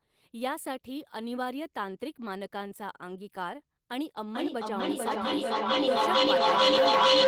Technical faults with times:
4.28-7.27 feedback howl

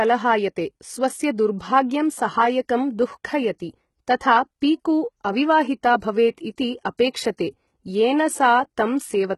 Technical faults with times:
0.00-9.37 HE-AAC compression
7.37 pre-echo

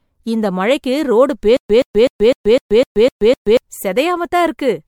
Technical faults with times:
0.00-4.88 generation loss
1.57-3.57 stutter with silent gaps

